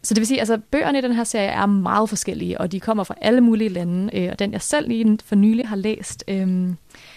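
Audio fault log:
5.62–5.64 s, AAC frame loss with muting. Just after "jeg selv lige for", the speech dips into a short, soft-edged gap. About 20 ms is missing, fitting two 10 ms frames of likely low-delay AAC. The decoder zeroed their spectrum, and overlapping windows fade out and back in.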